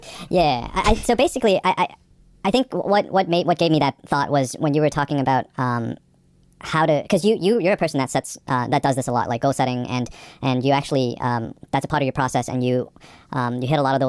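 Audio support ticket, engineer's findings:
Wrong sample rate, entire clip. Speech high and hurried, 1.5x speed, pitch up 7 semitones. Fits 16 kHz material played at 24 kHz without conversion. Spectrogram: harmonics and formants scaled up 1.5x, syllables compressed in time. Waveform: events bunched tighter.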